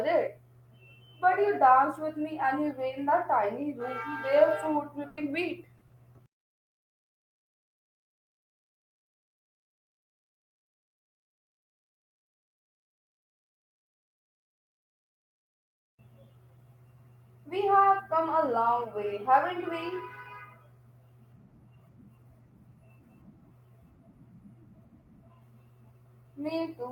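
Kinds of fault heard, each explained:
Burst of packet loss: at 5.07 s the sound turns into a held, fading continuation for 100 ms, then resumes further on with 100 ms skipped. Several packets in a row arrived too late or not at all, and the receiver extended the last sound while turning it down.
Short concealed packet loss: two brief smears, at 5.77 s lasting 40 ms and at 5.87 s lasting 20 ms, where the sound wobbles before blending back. Small holes in the stream were patched by continuing the preceding sound, then crossfading into the real audio.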